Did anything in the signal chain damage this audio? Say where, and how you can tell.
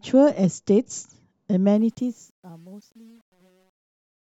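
Yes. From 1.72 s the speech's fade-out turns grainy, and from 2.33 s to the end at 4.31 s it is at its grittiest. This is truncation distortion on a fade. The volume stage, which fits about 9-bit resolution without dither, turns the quietest samples into coarse square steps.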